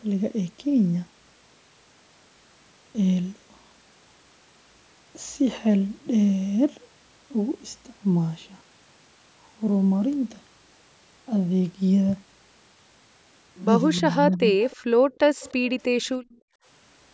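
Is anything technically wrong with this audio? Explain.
Yes, the last few seconds of this speech show echo-canceller trouble.

Speech suppressed in double talk, 14.0–14.09 s and 14.36–14.58 s: the voice dips, slightly and then by around 20 dB, likely because the canceller ducked it while both sides talked.

Echo leak, 14.61–14.76 s, 15.15–15.19 s, 15.4–15.53 s and 16.29–16.4 s: faint scraps repeat the voice about 0.3 s late, likely loudspeaker pickup the canceller missed, roughly 25 to 40 dB down.

Background gated by the echo canceller, 14.86–15.1 s and 16.4–16.65 s: the room sound drops by about 31 and 36 dB while the canceller clamps the microphone, then returns.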